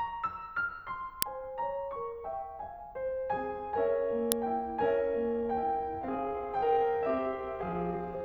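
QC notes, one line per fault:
1.22 s and 4.32 s, uninitialised buffer: each event is a brief, loud crack lasting about 0.73 ms, which fits a 32-sample block being played before any music was written into it, so leftover memory came out as samples.
5.25 s to the end, time-stretched section: the music abruptly slows to about 0.63 times its speed while the pitch holds steady, and it drags. The likely cause is software lengthening this stretch by repeating short pieces of audio rather than resampling.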